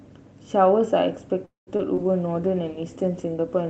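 Speech, carried over an Opus call path with audio reaching up to about 8 kHz. From 1.45 to 1.69 s there is a call audio freeze. The last sound carries on briefly, then about 150 ms of near silence follows. The gap lasts 215 ms in total. When the sound resumes, it picks up where it stopped. Nothing is lost, but everything after runs 215 ms late. The likely cause is packets held up in transit, leaving the jitter buffer empty. Two short concealed packet losses follow. The first is at 1.77 s, the second between 1.95 and 2.04 s. In each, about 20 ms of audio never reached the decoder in time. The receiver extended the preceding sound to cover the hole, then blended back into real audio. Each is heard as a brief smear or wobble. The second stretches the timing by a few milliseconds. A call bitrate drop begins at 1.99 s and lasts to the end. The encoder falls from 32 to 14 kbps and stays at that floor for 1.53 s. 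With less than half the bits, coding becomes coarser. The speech turns rougher and more watery through the final stretch.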